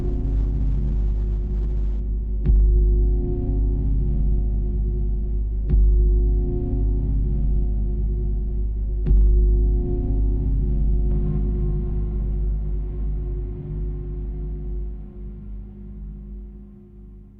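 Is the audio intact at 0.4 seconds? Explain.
No. The adaptive stream is starting at a low bitrate from 0.0 to 2.0 s. The player opens on a heavily compressed version, consistent with Opus at about 12 kbit/s, before stepping up to a 64 kbit/s stream. Until then treble is missing or synthetic and codec artefacts are strong, and at 2.0 s quality jumps abruptly with no gap.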